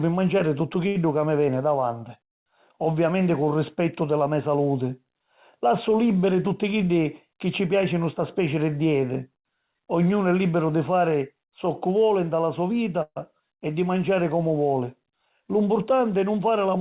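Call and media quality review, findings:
Short stall from a late packet, 0.88–0.97 s, between "manciari tuttu" and "ca mi veni davanti": sound held about 70 ms with a slight buzz or dip, nothing lost. Jitter buffer ran dry and the receiver stretched the last audio until the packet arrived.

Call audio freeze, 13.02–13.18 s, after "voli nta la so", before "e di manciari comu": a fading buzz or hiss of about 137 ms, including 50 ms of silence, then audio resumes where it stopped. Likely delayed packets emptying the jitter buffer.

Jitter buffer speed-up, 15.29–16.0 s, after "di manciari comu voli": speech runs about 9% fast at unchanged pitch, sounds hurried. The buffer was trimming excess delay by cutting pitch-period-sized pieces, roughly 70 ms in total, across narrowband audio with nothing above 4 kHz, which fits G.711 A-law at 64 kbps.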